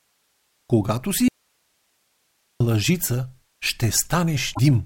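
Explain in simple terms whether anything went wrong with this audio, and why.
From 1.28 to 2.60 s the speech cuts out abruptly, leaving only faint hiss: an audio dropout to a faint residue, likely a lost signal on a still-live line.

Between 4.51 and 4.59 s a short glitch is heard. This is damaged data in a compressed stream: the decoder misreads corrupted frames and searches for the next good frame to recover.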